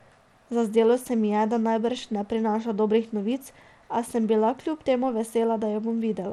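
Speech with gritty, flickering treble throughout, likely from Bluetooth SBC compression at a starved bit pool fitting about 96 kbps. The spectrogram shows nothing above 17 kHz.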